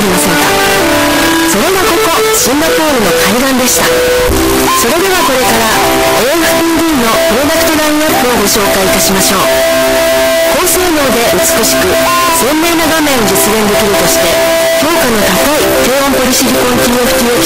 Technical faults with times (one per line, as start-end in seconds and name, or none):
0.00-17.46 signed and unsigned mixed up